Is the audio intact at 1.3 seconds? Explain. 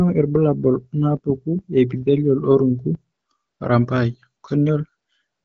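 Yes, the audio is intact at 1.3 seconds, with no fault at that moment.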